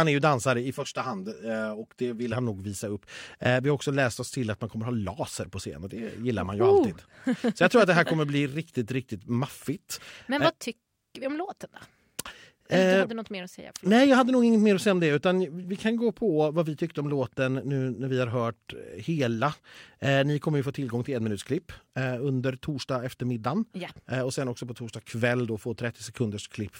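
From 0.76 to 2.32 s, channel delay causes comb filtering. One channel lags about 5 ms before mono summing, notching near 100 Hz upward. Speech sounds hollow.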